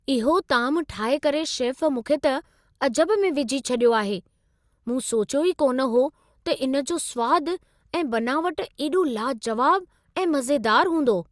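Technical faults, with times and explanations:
No technical faults can be heard in this speech recording. Nothing in it calls for a time or an explanation.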